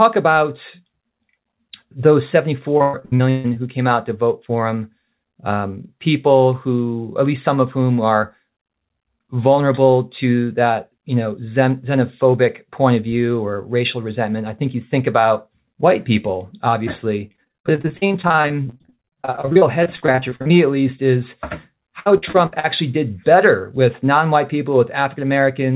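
Repeated packet loss (robotic sound) hits 2.78–3.58 s, 17.28–20.52 s and 22.00–22.66 s. Gaps of up to 142, 45 and 60 ms are patched by repeating the last sound, so the speech turns choppy. On a spectrogram the harmonics smear into stair-steps, and the waveform shows looped segments.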